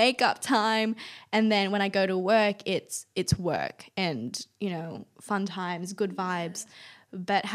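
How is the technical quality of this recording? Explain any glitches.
Three brief clicks mark the recording. They are dropped samples at 2.20 s (after "when I go to"), 4.28 s (after "work it's it's work") and 6.06 s (after "you know fun times"). Each is likely a handful of samples, a fraction of a millisecond, skipped, so the waveform jumps abruptly and clicks sharply, showing as a thin vertical spectrogram line.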